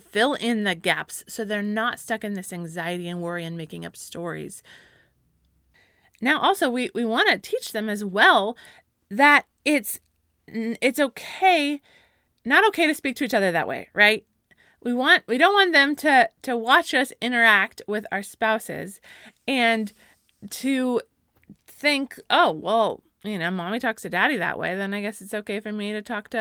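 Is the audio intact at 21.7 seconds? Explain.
Yes, the audio at 21.7 seconds is intact, with no fault heard at that moment.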